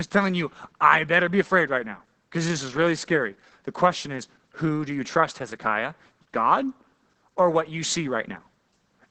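Opus voice compression affects the speech from start to finish, and the damage is heavy. Nothing is present above 9 kHz, so the top of the band is gone and the speech sounds muffled. The coder is running in its SILK linear-prediction mode, which models the voice and codes its excitation coarsely when bits are scarce. That leaves a hoarse, somewhat robotic quality, consistent with a low bitrate of around 10 kbps.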